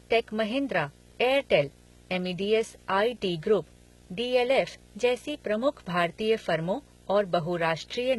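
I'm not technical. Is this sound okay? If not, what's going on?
No. Two problems run through the whole recording.

The first is video or display buzz: a steady, low, harsh hum under the voice, fairly quiet but always there, with a fizzy hiss riding on top. It comes from a screen or video cable leaking electrical noise into the audio. It repeats 60 times a second, matching the picture's refresh rate. Ordinary mains hum is smoother and rounder, while this buzz has a rough, edgy texture.

The second is damage that sounds like HE-AAC compression, most likely from squeezing the file very hard to make it small. The voice sounds processed, and s and sh sounds come out gritty, metallic or slightly lisping. The top end seems bright, but that brightness is artificial: the encoder copied lower sounds upward to fake the missing treble, and nothing is left above about 11.8 kHz. Plain muffling from a cheap microphone would sound dull instead of falsely crisp.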